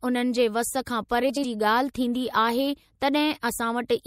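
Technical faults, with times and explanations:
throughout MP3 compression likely causes the watery, swirly texture and dulled treble. Weak frequency detail flickers between frames, which fits about 64 kbps.
1.29–1.45 s frames out of order. Two adjacent 72 ms blocks play swapped, giving a garbled flutter. No time is lost.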